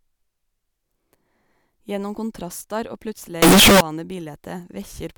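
Signed and unsigned mixed up, from 3.42 to 3.81 s: the speech abruptly turns into a loud, harsh roar, quiet moments as loud as the rest. This is likely 16-bit samples read with the wrong sign convention, flipping the top bit so every zero crossing leaps full-scale.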